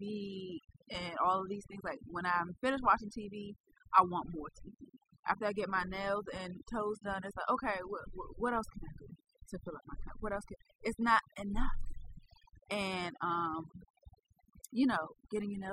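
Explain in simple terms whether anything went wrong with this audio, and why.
Something did go wrong: overdone noise removal, running through the whole clip. A cleanup tool was set too strong, so quiet parts of the speech vanish with the background noise, leaving tiny twinkling specks in otherwise silent gaps, unlike a simple gate's clean on-off cuts.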